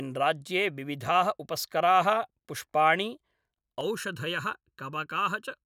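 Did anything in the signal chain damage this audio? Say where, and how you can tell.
Yes. From 3.81 s to the end, a channel delay (comb filtering) at mono summing makes the speech hollow: one channel lags under a millisecond, cutting fixed notches from about 700 Hz, unlike sweeping flanger notches.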